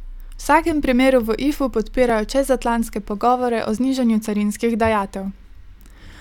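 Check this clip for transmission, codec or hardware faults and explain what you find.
Two brief skips break up the speech, at 2.10 s and 4.26 s. Each is a dropped buffer (overrun). The first comes just before "čezatlantske pogovore o znižanju". The second comes just after that same phrase. At each point the sound jumps ahead. The likely cause is samples overwritten before the program read them. A few milliseconds are lost, and the audio either side is spliced together with no gap of silence.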